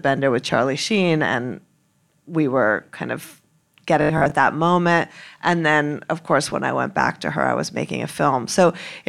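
From 4.02 to 4.32 s the speech takes on a robotic sound from repeated short buffers, likely because audio arrived too late and a 20 ms chunk was replayed in place of roughly half the real signal. This imposes a rigid 50 Hz metallic buzz. A spectrogram shows evenly spaced 50 Hz harmonic lines, and the waveform shows identical 20 ms cycles.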